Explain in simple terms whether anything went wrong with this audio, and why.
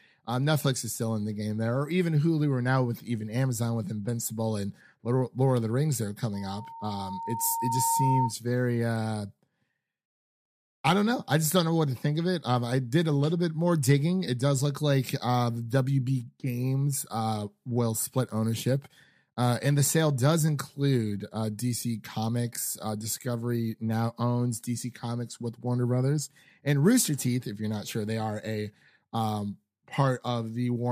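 Something did go wrong. From 6.33 to 8.34 seconds there is a loudspeaker feedback squeal. A microphone is picking up its own loudspeaker. One pitch, near 915 Hz, keeps looping and growing. It swells over about a second and a half, ending up a little louder than the speech.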